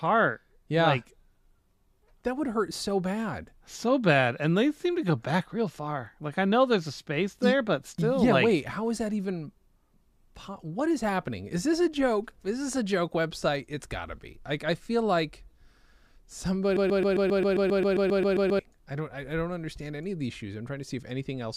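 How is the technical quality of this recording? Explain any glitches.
The recording has one clear glitch, a broken-record loop in the speech. From 16.77 to 18.59 s, just before "I don't I don't", a fragment about 133 ms long repeats exactly, back to back, 14 times. It sounds like a rigid, mechanical stutter with an even pulse of roughly 7.5 per second, and whatever should have been heard there is missing. The likely cause is a player, encoder or stream stalling and resending the last piece it held. On a spectrogram this shows as identical blocks tiled at a fixed spacing, and the waveform repeats the same shape over and over.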